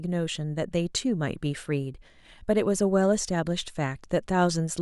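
Speech with about three clicks between 1.27 and 3.68 s, spaced evenly every 1.2 s. Those clicks are likely clock drift buffer slips, each dropping or repeating about 15 samples as two clocks disagree by a few hundred ppm. Their strict regularity sets them apart from random dropouts.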